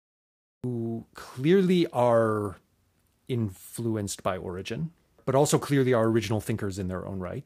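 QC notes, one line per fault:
0.00–0.64 s, cut-off start: there's dead digital silence until 0.64 s, then the sound jumps in already in progress, with no attack or fade-in. The capture began late and caught the sound partway through, so its opening is missing.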